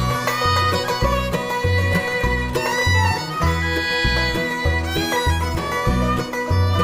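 No technical faults are audible.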